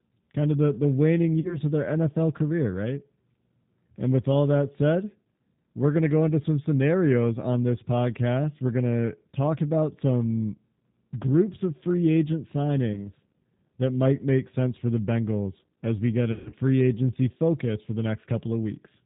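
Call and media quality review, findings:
G.729 codec (G.729A, 8 kbit/s), full clip. Plainly audible rough, synthetic speech quality; no content above 4 kHz. Mechanism: speech rebuilt from a vocal tract filter, pitch predictor and sparse pulses per 10 ms frame, so fine spectral detail is lost.

VoIP packet loss concealed by the speech codec, 1.40–1.58 s, after "of the the waning", before "of their". 40 ms missing, fits two packets. Decoder extrapolates last pitch and filter at falling gain; sound stretched into buzzy tone or coloured noise.

12.93–13.07 s, after "groups of free agent". 20 ms missing, fits one packet. Same concealment, shorter.

16.32–16.54 s, after "as we get", before "free agency focus for". 160 ms missing across 200 ms, longest run 140 ms. Concealment fades out; speech recovers over following frames as decoder state rebuilds.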